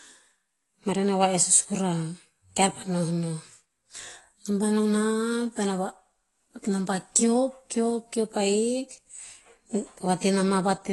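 The speech clip has been through a lossy encoder all the way through, most likely AAC compression at a low bitrate, in the region of 32 kbps. The encoder quantises each frame's spectrum coarsely against a hearing model, so nothing survives above 11.5 kHz and thinner upper bands are dropped or patched. The codec damage is plainly audible: the speech sounds dull and smeared, with a warbling, fizzy texture on sustained vowels and sibilants.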